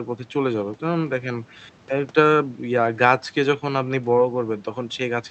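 No technical faults can be heard in this speech recording, which has come through a WebRTC call path working as intended, with a top end that rolls off in a way that fits Opus coding at an 8 kHz audio bandwidth.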